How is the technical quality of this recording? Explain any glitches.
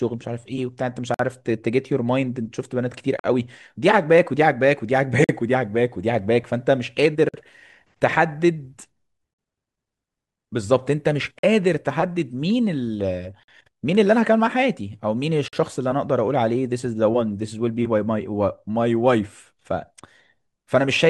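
The recording has one recurring fault. A gap at a join of encoded pieces opens at 1.14, 3.19, 5.24, 7.29, 9.34, 11.39, 13.43 and 15.48 s, roughly every 2 s, each about 48 to 51 ms long. The speech was encoded in separate segments and joined untrimmed, so each seam keeps the encoder's start-up delay and final-frame padding. You hear a brief dropout with smeared edges, then the speech resumes where it stopped.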